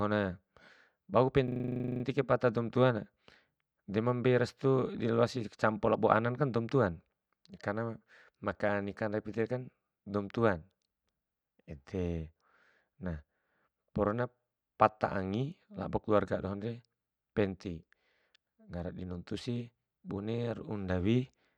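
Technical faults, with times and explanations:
1.48–2.04 s, system hang loop: the computer or driver froze and one 40 ms slice repeats 14 times at 25 Hz, giving a buzzy stutter right before "kai pata doum".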